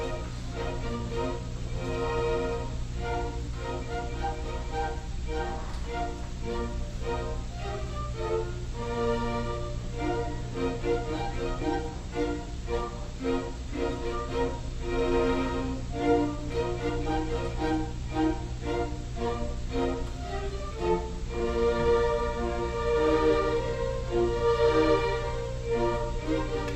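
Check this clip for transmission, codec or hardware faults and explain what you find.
Two kinds of transmission fault are present: a skip ahead and two stretches of jitter buffer speed-up.

Skip ahead at 11.61 s. Roughly seven tenths of a second of audio never reached playback. Either it was lost in transit or the jitter buffer overflowed and discarded it while later audio was already queued. The receiver inserted nothing to cover the loss, so the sound on either side of the jump is butted together almost seamlessly. The result is an abrupt forward lurch in the audio rather than a silence or dropout.

Jitter buffer speed-up from 11.76 to 14.82 s, and again from 19.51 to 21.97 s. After the delay shifted, the buffer held more audio than its target. The receiver trimmed it back by cutting out many tiny segments, each one or a few pitch periods long: a few tens of milliseconds in total across the first stretch and somewhat more across the second. 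Playback runs about 1 to 2 percent fast with unchanged pitch.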